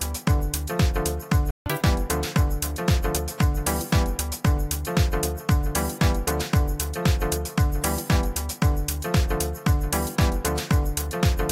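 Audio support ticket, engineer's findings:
Playback stall, 1.51–1.66 s: output likely starved of buffered data or player thread blocked. Sound cuts out mid-flow for about 153 ms of silence, then resumes from the point where it stopped rather than skipping ahead.

Catch-up at higher speed, 1.66–1.81 s: player resampling its backlog to recover the lost time. Playback runs at 2x speed, pitch jumps roughly ten semitones up, chipmunk-like for about 150 ms, then snaps back to normal rate and pitch.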